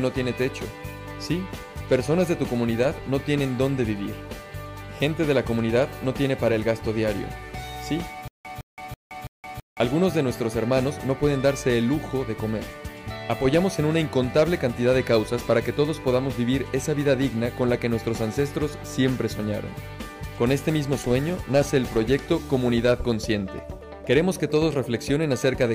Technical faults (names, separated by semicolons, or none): stutter with silent gaps